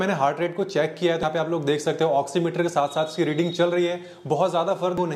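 At 1.23 s a brief blip of about 4 ms cuts through the audio, and at 4.98 to 5.01 s a longer glitch of roughly 32 ms follows. Both are damaged data in a compressed stream: corrupted or missing bytes leave the decoder unable to parse those frames, so it loses sync until it finds the next valid frame header. The second event lasts longer, spanning more unreadable data before decoding recovers.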